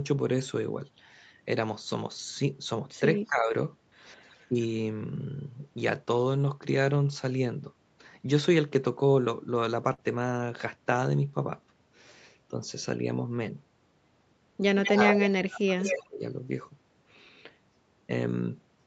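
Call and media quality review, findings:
Speech dips and thins in pieces at 3.17–3.54 s (about 15 dB), 4.49–4.55 s (about 10 dB), and 14.88–16.21 s (about 30 dB). Likely speech suppressed in double talk: the echo canceller ducks near-end speech while the far end talks.

Faint-to-clear delayed copies of the voice, 185 ms behind the original, at 4.29–4.45 s (about 35 dB down), 14.84–14.91 s, 15.23–15.29 s (about 10 dB down), and 15.80–16.06 s (about 5 dB down). These are likely echo leak from a loudspeaker, with residual echo that its canceller missed.

Held, fading sound then a jump forward at 9.93–10.01 s. This is a burst of packet loss: 47 ms of concealment bridges the gap, and 40 ms of audio is missing. The Opus path itself band-limits everything to 8 kHz.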